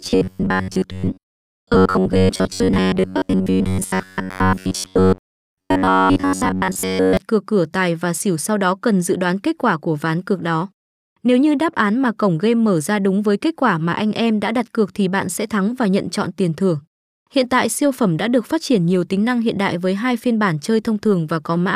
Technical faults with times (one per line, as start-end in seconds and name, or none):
0.01-7.17 robotic sound from repeated short buffers